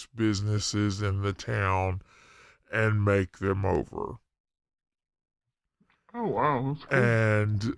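Throughout this speech the sound is low and sluggish, slowed to 0.69 times its speed and about 6.5 semitones lower, a wrong sample rate consistent with 32 kHz audio played back at 22 kHz.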